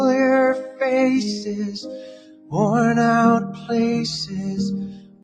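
A speech noise suppressor stays active throughout, treating steady parts of the sound as noise, so the level pumps and swings by around 15 dB. The noise suppressor cuts the sound from 1.78 to 2.53 s, by about 15 dB; from 3.51 to 3.70 s, by about 9 dB; and from 4.86 s to the end, by about 18 dB. Each time the sustained sound sinks or its tail shortens.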